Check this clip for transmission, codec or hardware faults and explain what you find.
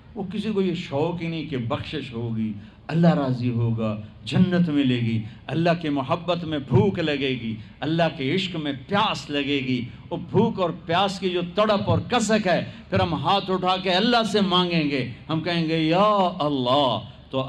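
Nothing here sounds wrong: I listened closely and heard no faults of any kind anywhere in the clip.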